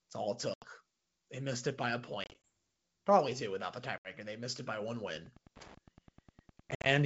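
Speech carried over a wideband ADPCM-coded call shows packet loss at 0.54 s after "all it", 2.24 s, 3.98 s after "probably two without the", and 6.71 s. Gaps of 70 to 100 ms, some scattered, leave abrupt silences, and the decoder's predictor resynchronises afterward. From 5.08 s, after "missed it by one", Wi-Fi interference adds ticking every 102.4 ms, about 25 dB below the speech, from a nearby radio's beacons being rectified.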